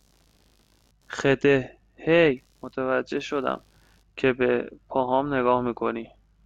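A faint buzz, pulsing at around 70 times a second and sitting roughly 45 dB below the speech, runs through the whole recording. This is computer activity noise: shifting processor or graphics load disturbs the ground the audio circuit shares, leaking into the recording.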